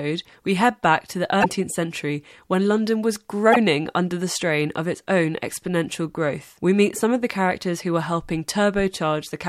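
At 1.40 to 1.46 s, between "head back to the" and "century when", and again at 3.52 to 3.57 s, just before "under the strain of", damaged data in the compressed stream makes the decoder lose frame sync, producing a short glitch.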